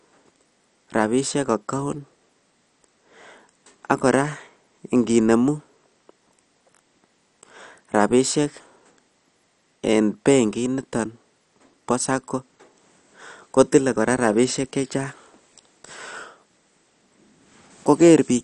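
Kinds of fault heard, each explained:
MP2 compression: the speech sounds dull throughout, with a gurgling, granular distortion and nothing above 11.3 kHz. The likely cause is MPEG Layer II coding starved of bits, which switches off upper sub-bands and coarsely quantises those left. The sound fits a rate near 48 kbps.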